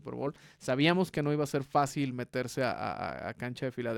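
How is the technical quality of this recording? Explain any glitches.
The technical quality is sound, with no glitches to explain anywhere in the recording.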